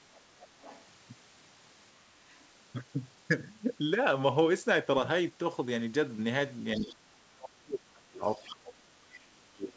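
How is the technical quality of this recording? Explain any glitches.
The technical quality is hurt by echo cancellation on a speakerphone-style call: the far end's voice leaks into the recording several times, and the near talker is turned down twice while both sides speak. Everything sits below 8 kHz, which fits a wideband call codec such as G.722.

Other side's voice leaking through occurs at 0.14 to 0.21 s, 0.4 to 0.84 s, 2.3 to 2.36 s, 6.77 to 6.84 s and 8.44 to 8.5 s. The likely cause is an echo canceller that left part of the loudspeaker signal in the microphone feed. What you hear is a second voice underneath, usually faint (about 35 dB down at first, about 20 dB at 0.4 s) but much closer at 6.77 s, only about 10 dB below the main speech.

Speech suppressed in double talk happens briefly at 2.08 to 2.14 s, a dip of about 10 dB, and then from 6.77 s to the end of the clip, with drops reaching about 25 dB. 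This likely happened because the echo canceller could not separate the talker from the incoming echo and attenuated both. The main voice sinks, thins out and partly drops away while the other side is talking.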